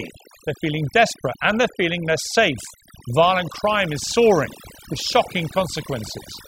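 From start to end the speech carries overdone noise removal: an overly aggressive reducer pulls down any frequency band near its noise estimate, taking quiet speech detail too. Gaps fall to near silence with twinkling specks. A spectrogram shows scattered isolated dots and ragged, eaten-away harmonics.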